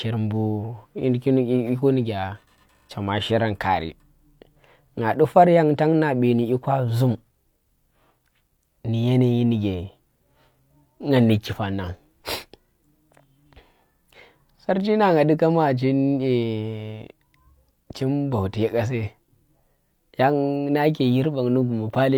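Nothing in the speech here stands out as a technical fault; there's simply no problem to point to at any moment in the recording.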